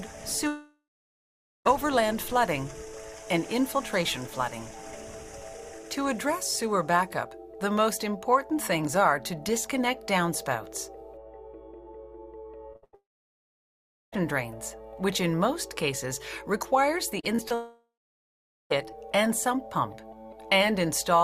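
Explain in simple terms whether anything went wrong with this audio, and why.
Several things went wrong, and they all trace back to audio getting lost on its way across a network.

The biggest problem is three long network dropouts: 0.47 to 1.67 s, 12.95 to 14.14 s, and 17.54 to 18.72 s. Each time, a bit over a second of audio simply never arrives. The receiver tries to stretch the last bit of sound into a fading buzz or hiss, but that only lasts a moment. Most of each gap is dead air, roughly 0.9 s, 1.1 s and 0.8 s. When the sound comes back, the lost stretch is just skipped. A connection that briefly stalled is the likely cause.

Right before the middle dropout, at 12.73 to 12.76 s, there's a short concealed packet loss. About 20 ms goes missing, and the receiver covers it by carrying the previous sound forward and blending back in. You'd hear a quick smear or wobble rather than a clean hole.

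That's followed straight away by two bursts of packet loss, 12.76 to 12.84 s and 12.84 to 12.95 s, losing about 60 ms and then 80 ms. Here the patched-in sound is stretched long enough that it turns into a held buzz or fading hiss, and whatever was in those gaps is gone. Together these lead directly into the dropout, so the connection is clearly falling apart over that fifth of a second.

Just before the last dropout, from 17.2 to 17.52 s, there's repeated packet loss (robotic sound). Four small gaps, none longer than 30 ms, hit in quick succession, so about a quarter of that stretch is filled-in guesswork. The constant patching makes it choppy, with pieces missing.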